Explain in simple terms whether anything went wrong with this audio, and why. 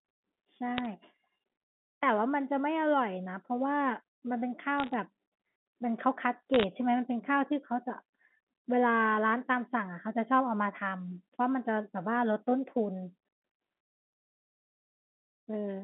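Bit errors on a digital phone line at 0.78–0.86 s, 4.78–4.94 s and 6.54–6.64 s: scattered flipped bits corrupt single samples, adding brief sharp ticks and crackle over the speech.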